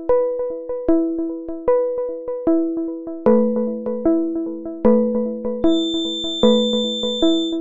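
A feedback whistle enters at 5.61 s and runs to the end. It is a thin, steady tone near 3.6 kHz, sitting roughly 10 dB under the main sound. Its level swells and fades slowly. The likely cause is a loudspeaker-to-microphone loop held just short of runaway feedback.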